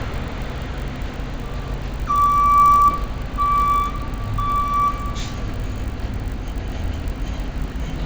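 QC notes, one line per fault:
Throughout: resampler restarted on every block. The sound carries a steady buzz at 50 Hz, made of small ticks at each block edge, and it is present only where there is signal. The rate conversion from 16 kHz to 48 kHz was run separately on each 20 ms block. At every edge the converter lacked the real neighbouring samples, so each boundary picked up a small error. Fifty edges per second fuse into the buzz.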